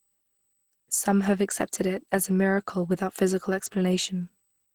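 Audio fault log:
Throughout, USB whine: a steady, fixed-pitch tone at 8 kHz sits faintly beneath the speech, roughly 45 dB below it. That pitch matches the 125-microsecond microframe rate of a USB bus, whose current draw leaks into the audio through power or ground.
Throughout, Opus compression: the speech sounds plainly muffled and hoarse, with grainy texture where finer detail should be. This is likely Opus running in its hybrid speech mode at a starved bitrate, around 16 kbps. The encoder spends scarce bits on coarse band energy rather than fine detail, although the spectrum still extends to about 20.4 kHz.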